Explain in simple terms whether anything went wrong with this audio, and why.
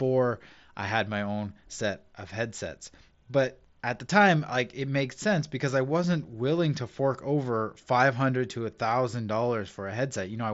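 Nothing went wrong with this audio, because the speech comes through the Bluetooth headset link as that link normally sounds.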